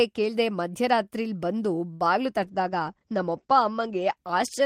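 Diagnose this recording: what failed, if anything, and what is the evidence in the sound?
Network stage: a late packet drained the jitter buffer, and this short stall from a late packet stretches the speech by 67 ms between 1.93 and 2.05 s.

Codec stage: a call bitrate drop from 32 to 12 kbps at 2.46 s cuts the bandwidth from 20 to 8 kHz, muffling and roughening the speech to the end.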